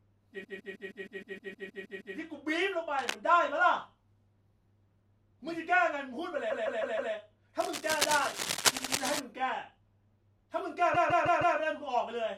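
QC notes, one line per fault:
0.43–2.16 s, 6.49–7.12 s, 8.77–8.92 s, 10.93–11.56 s: repeated frames. A short block of compressed audio is decoded again and again, so the same slice of speech stutters. The first run loops a 157 ms block 11 extra times, adding 1.72 s. The second and fourth each loop 157 ms four times, adding 0.63 s apiece, which fits runs of six frames. The third loops a 78 ms block twice, adding 0.16 s.
2.98–3.15 s and 7.59–9.20 s: cable scratch noise. Dense, irregular bursts of crackle and rustle sit over the speech. The first burst is brief and about 5 dB below the signal. The second lasts about 1.6 s at roughly the same level as the speech and overlaps the 8.77 s stutter. The likely cause is a worn cable, connector or control being moved, with its contact resistance fluctuating rapidly.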